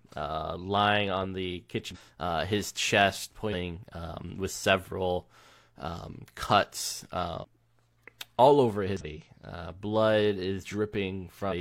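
Speech with damaged data in a compressed stream: brief glitches at 1.91, 3.49, 7.39, 8.97 and 11.47 s, each about 50 to 60 ms, as the decoder misreads corrupted frames and resyncs. On a spectrogram each shows as a narrow break, and on the waveform as a short disruption.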